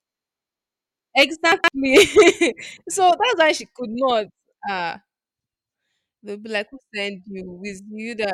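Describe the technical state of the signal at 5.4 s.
At 5.36 to 5.44 s the speech has chunks out of order. A 40 ms block arrived late and was played one chunk after the block that should follow it, so the two swap places. Nothing is lost, but three hard joins give a brief jumbled stutter.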